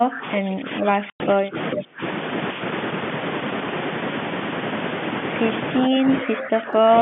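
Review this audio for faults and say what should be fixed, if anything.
The speech gets pushed down in three stretches: 0 to 1.57 s, 1.75 to 2.01 s, and 5.79 s to the end, with dips of roughly 15 to 25 dB. That's speech suppressed in double talk, likely from the echo canceller mistaking both sides talking for echo and ducking everything. Better double-talk detection, with gentler suppression when both ends are active, would stop it.

Inside that first dip there's packet loss filled with silence: a hard-edged 100 ms hole from 1.1 to 1.2 s, which fits a handful of 20 ms packets going missing. Packet loss concealment, or a jitter buffer with some slack, would cover holes like that instead of leaving dead air.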